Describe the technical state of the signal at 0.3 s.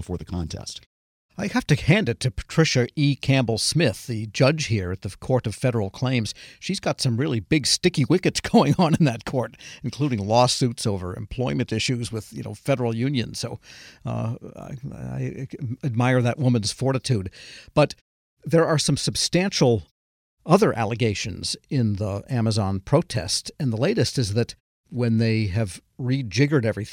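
At 0.3 s the signal is intact, with no fault present at that moment.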